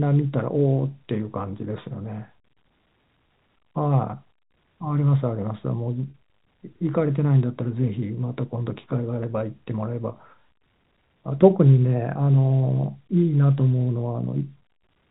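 At 6.1 s, packet loss with pitch repetition bridges a 40 ms gap, consistent with two 20 ms packets lost, producing a brief, slightly held buzz over the telephone-band speech.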